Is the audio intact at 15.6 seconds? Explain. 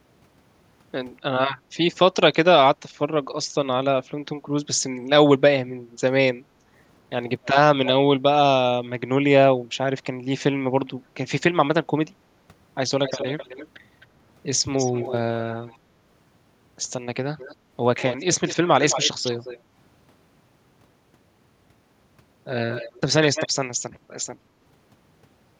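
No. From 14.73 to 15.77 s there is an echo leak: a faint copy of the speech returns about 261 ms late, well below the direct sound. This is likely a far-end loudspeaker feeding its microphone past an echo canceller that failed to subtract it fully.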